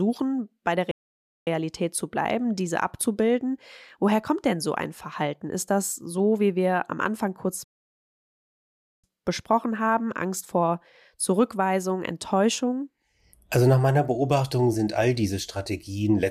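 At 0.91 s the speech cuts to silence for about 0.55 s, then a second, longer gap runs from 7.64 to 9.04 s, about 1.39 s. Both are playback stalls, likely the player running short of data or its output thread being blocked.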